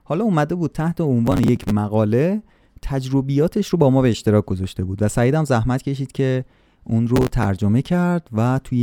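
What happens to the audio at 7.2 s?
Processor overload crackle runs from 7.16 to 7.46 s. The processor falls behind and misses a run of deadlines for its small audio buffers, which sound like they are roughly 5 ms each, with around ten missed. Each miss repeats a scrap of old audio with hard edges instead of fresh speech. Strung together, these produce a short burst of gritty, tearing crackle over the speech that stops once the load eases.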